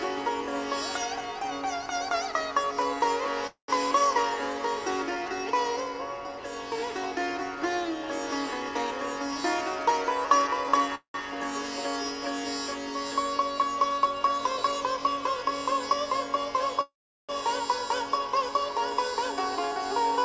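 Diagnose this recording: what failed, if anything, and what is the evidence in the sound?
Network stage, call audio freeze. At 3.47–3.71 s, 10.95–11.17 s and 16.81–17.32 s the sound stretches into a fading buzz, then goes silent, then resumes where it stopped. The fills last 213, 190 and 476 ms. Likely delayed packets ran the jitter buffer empty.

Buffer stage, jitter buffer speed-up. From 10.42 to 10.89 s, 14.24 to 14.98 s and 18.92 to 19.91 s the sound hurries at unchanged pitch, running at 111%, 108% and 106% speed. The receiver trimmed short pitch-period pieces, roughly 70 ms each time, to shed built-up delay.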